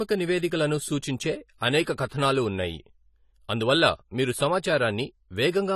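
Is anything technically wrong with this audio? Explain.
Yes, there are two problems. Throughout the speech the sound is dull and smeared, with a plainly audible watery, fizzy texture on sibilants and held sounds, and nothing above 14 kHz. This is likely AAC compression, with AAC-LC quantising each block of frequency lines coarsely against a hearing model. The missing top end and the roughness fit a low bitrate of around 32 kbps, where the encoder cuts high bands and coarsens the rest.

From 1.83 to 1.87 s, a short hiss of about 41 ms comes just before a sharp onset, and the attack itself sounds softened. This is pre-echo. The codec spreads its quantisation noise across the whole transform block. Because the loud attack lands late in that block, noise scaled for the attack also fills the quiet gap just before it, where nothing masks it.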